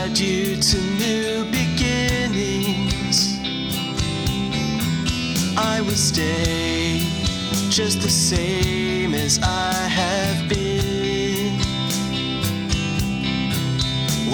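No technical faults can be heard anywhere in this clip.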